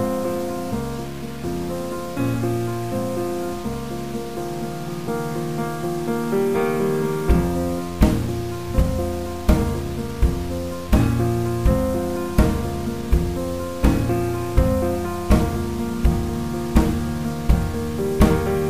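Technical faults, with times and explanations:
Throughout: low bit depth without dither. The sound is coarse and grainy, and the grit rises and falls with the level. Quiet passages turn harsh and sputtery, and the faintest parts drop to silence. This likely comes from truncating to about 6 bits with no dither, which leaves error of roughly 20 dB below the signal. On a waveform the quiet stretches look like stair steps.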